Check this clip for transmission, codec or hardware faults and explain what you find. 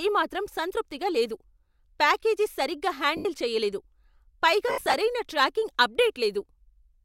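Lost LE Audio frames are the fault, in two places. From 3.17 to 3.25 s, about 80 ms drops out, consistent with eight 10 ms frames. From 4.68 to 4.94 s, about 160 ms is lost in scattered gaps, the longest run around 70 ms. The decoder repeats the last spectrum with random signs, so the sound turns into a short noisy smear and then fades. That smear-then-fade sets it apart from a hard dropout or click, and the light codec thinning sounds unrelated.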